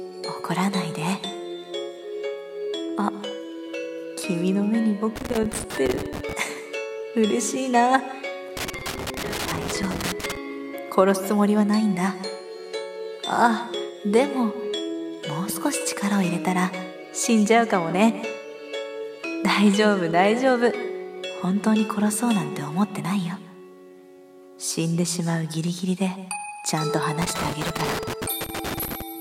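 The audio carries loose connector crackle in three irregular bursts, from 5.16 to 6.33 s, 8.57 to 10.37 s and 27.22 to 29.02 s. A worn or dirty contact is intermittently making and breaking, chopping the signal into scratchy crackle.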